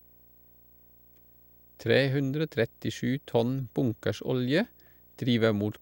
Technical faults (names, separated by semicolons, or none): video or display buzz